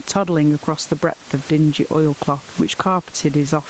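Throughout the speech, the microphone gain is likely set far too high, so a fast limiter or compressor pulls it down on every loud moment. The result is gain pumping, with a swing of around 10 dB, leaving the level squashed; the room noise sits about 29 dB below the speech.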